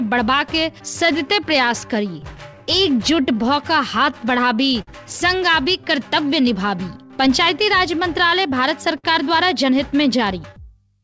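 Clock drift between sender and receiver runs through the whole clip, with the sender's clock running about 5 percent slow. Because the far end delivers audio a little slower than it is played out, the jitter buffer keeps draining. Unlike random network jitter, the resulting errors all point one way and never reverse. The audio passes through a call path whose band stops at 8 kHz, which fits a G.722 codec at 64 kbps. The repeated timing corrections span 0.04 s to 11.02 s. The receiver keeps repeating small slices to fill the shortfall, playing the material at 96 percent speed and adding around 0.4 s in total. These corrections are unevenly spaced. What separates them from packet-loss concealment is that each repeat is tiny and they stretch the timeline instead of leaving gaps. There are two short stalls from a late packet. The first runs from 4.82 s to 4.89 s with 52 ms filled, and the second from 8.98 s to 9.06 s with 59 ms filled. 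In each, the buffer ran dry and the last sound was held until the packet arrived. The sound then resumes exactly where it left off. Nothing is missing, which distinguishes these stalls from a dropout.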